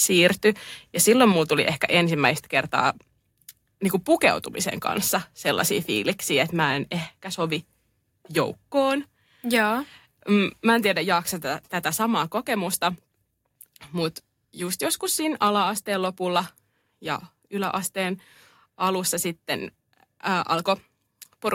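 At 1.32 s, just before "tuli ehkä", the speech and background drop together by about 4 dB, then by about 2 dB more at 2.34 s, just after it. These microphone volume step-downs are likely the call software lowering the input gain.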